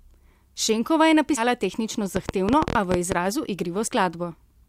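Speech with compressed frames skipped at 1.36–1.42 s and 3.87–3.90 s. The audio jumps ahead by roughly a tenth of a second, then by about 40 ms, which fits several missing 10 ms frames. Each join is visible as a brief discontinuity in the waveform and spectrogram. From 2.16 to 3.13 s a train of clicks ticks over the speech at an uneven pace, around 11.5 per second and about 15 dB above the signal. It appears as thin vertical broadband lines on the spectrogram, likely from electrical interference or a faulty connection.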